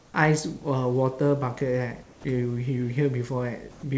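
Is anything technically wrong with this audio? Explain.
Yes. In the speech-free stretches, from 0.00 to 0.14 s and from 3.71 to 3.83 s, comfort noise replaces the background. The real room sound gives way to a smooth, featureless hiss, about 1 dB quieter in the first gap and about 4 dB quieter in the second, with the background sitting about 31 and 22 dB below the loud parts. The likely cause is discontinuous transmission, in which the sender goes quiet and the receiver synthesises stand-in noise. Unlike a dropout or noise gate, the pause never falls to silence. Only the texture and level of the background change. In the G.722 call path, nothing above 8 kHz is heard.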